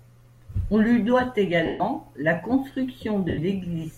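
At 1.66 s, about 140 ms of speech, and at 3.29 s, about 90 ms, suffer lost LE Audio frames: the decoder repeats the last spectrum with scrambled phase, so tones smear into noise that fades out.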